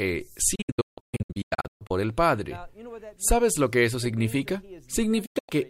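From 0.55 to 1.91 s the sound breaks into a burst of short holes, a digital broadcast dropout: the receiver muted on failed frames and resumed between them, losing about 0.9 s in all, the longest gap 160 ms, each edge faded over 8 ms. Hole lengths fit frames of about 32 ms. A second dropout at 5.26–5.50 s loses 192 ms. On a waveform these show as flat silent stretches; a spectrogram shows clean vertical blank columns.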